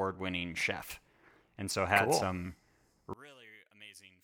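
From 3.13 s to the end at 4.24 s, the speech drops by about 27 dB to a faint residue. The likely cause is one channel inverted: reversed polarity cancels the shared centre content in a mono sum, leaving only the small inter-channel difference.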